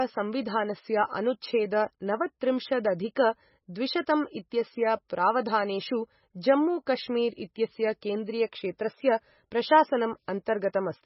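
Throughout, the speech sounds watery and swirly, with a hard spectrogram ceiling at 5.6 kHz and flickering holes below it, likely from heavy MP3 compression.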